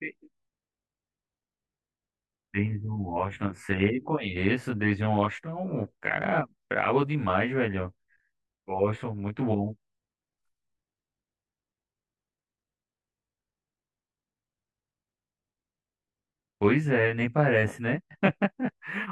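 From start to finish the speech carries channel delay (comb filtering): one channel arrives roughly 20 ms behind the other, and summing them to mono cancels shared content at evenly spaced frequencies. The first notch sits near 30 Hz, with further notches about every 50 Hz above it, giving a rough, slightly doubled sound. A spectrogram shows fine, fixed horizontal stripes of missing energy, and the waveform looks smeared, with each onset followed by a delayed copy.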